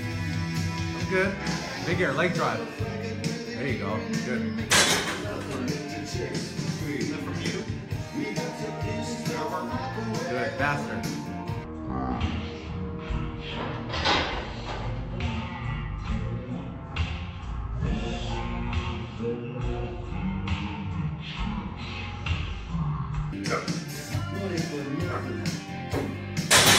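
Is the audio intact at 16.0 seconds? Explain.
No. From 11.64 to 23.33 s there is a section at the wrong speed, playing at 0.506 times normal rate, likely from fitting it to the wrong clock. Sound turns slow and deep, roughly ten semitones down. A spectrogram shows harmonics compressed downward and stretched in time, and the waveform looks widened.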